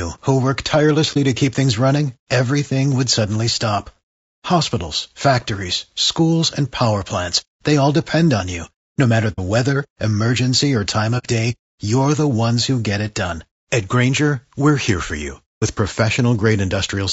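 From the start, the speech sounds rough and grainy. Noise fills the spaces between the harmonics. The top band sounds dull and synthetic. This is plainly audible throughout. It points to low-delay AAC compression, likely AAC-ELD at a low bitrate around 32 kbps. At this low bitrate it has too few bits to code the fine harmonic structure. So the fine harmonic structure smears into noise, and the highs get thinned.

AAC frame loss with muting then opens soft holes in the sound. They fall at 1.13 to 1.17 s, 9.32 to 9.40 s, 11.18 to 11.26 s, and 15.58 to 15.63 s. In each, the decoder had nothing for the missing frames and set their spectrum to zero. The overlapping windows fade the sound out and back in. The first gap is a brief dip, and the longer runs are soft-edged holes.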